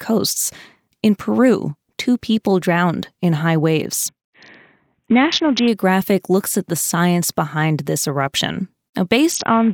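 Just after "drowned in high waves", from 4.09 to 5.68 s, the speech goes through a Bluetooth SBC bit pool drop, and it recurs from 9.32 s to the end. The encoder was starved of bits, which fits a fall from a bit pool of 28 to one near 5, around 54 kbps. The upper sub-bands lose their allocation and the rest are coarsely quantised, so the treble turns dull and a gritty noise rides on the speech.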